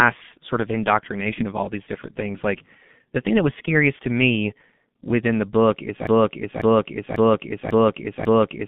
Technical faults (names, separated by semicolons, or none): G.723.1 codec; VoIP packet loss concealed by the speech codec; broken-record loop